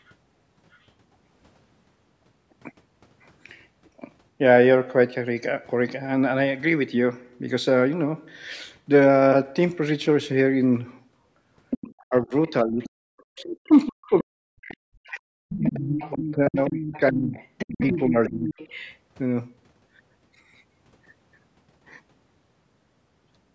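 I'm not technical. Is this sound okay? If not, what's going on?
No. From 11.7 to 14.23 s, and again from 15.61 to 18.97 s, a second voice is clearly audible. This is the other side's voice leaking through, likely from the loudspeaker playing them reaching this microphone. A very faint trace also appears at 0.73 s.

Between 12.03 and 18.51 s, the main speech repeatedly dips sharply or drops out, for about four seconds in total. This is speech suppressed in double talk, likely because both people spoke at once.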